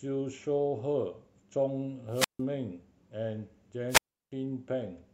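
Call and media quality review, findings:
Wireless microphone squelch dropout at 2.10–2.41 s (mute 153 ms) and 3.88–4.32 s (mute 343 ms): RF fade trips receiver squelch; spectrogram shows a broadband hiss smear, then a blank column.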